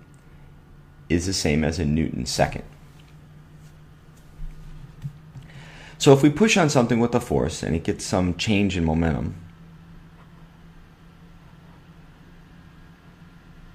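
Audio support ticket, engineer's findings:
No faults found.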